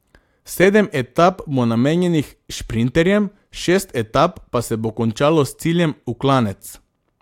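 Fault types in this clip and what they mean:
No technical faults are audible anywhere in the recorded speech, with the signal path behaving as expected throughout.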